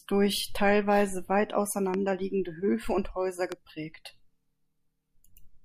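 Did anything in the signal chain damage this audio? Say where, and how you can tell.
Yes, two loud pops, at 1.94 s just after "durch teilweise weit" and at 3.52 s, each roughly 10 dB above the speech, which carries on underneath. Likely an analogue-side voltage spike from a plug, switch or static.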